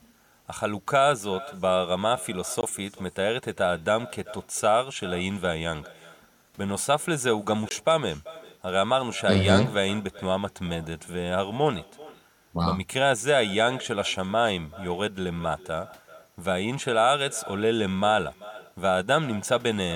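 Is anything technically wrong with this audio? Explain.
Yes, there are two faults in this speech recording.

Echo with no canceller runs throughout. The far end's loudspeaker output reaches its microphone and returns uncancelled, so each phrase is followed roughly 0.4 s later by a thin copy about 20 dB quieter. That distinct repeat, rather than a smooth decaying tail, separates it from ordinary room reverberation.

Blocks of digital silence occur at 2.61–2.63 s and 7.69–7.71 s, each 20 ms long. Output samples were replaced by zeros, so the sound drops to silence and returns abruptly. The hard cut distinguishes it from a concealed or faded packet loss.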